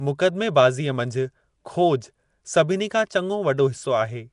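All the way through, the speech carries a plainly audible rough, hissy halo and a smeared, underwater feel, with nothing above 10.6 kHz. That's likely Nellymoser compression, Flash's old mic codec, which starves weak bands of bits and refills them with noise.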